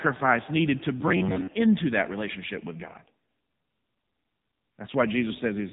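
Speech runs through the whole clip with the sound of an AMR narrowband mobile codec (AMR-NB) at heavy damage. Nothing above about 3.8 kHz survives, so consonants lose their edge and the audio sounds boxed in and telephone-like. The codec rebuilds each 20 ms frame from a vocal-tract filter excited by only a few pulses. At a rate that fits the 6.7 kbps mode, that pulse budget is thin, and the result is buzzy and synthetic.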